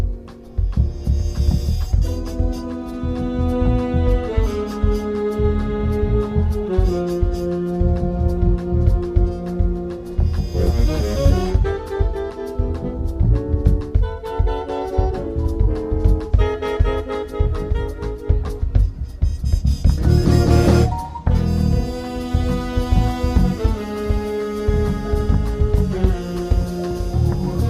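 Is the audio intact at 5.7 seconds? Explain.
Yes, the audio is intact at 5.7 seconds, with no dropout, click, distortion or other fault at that moment.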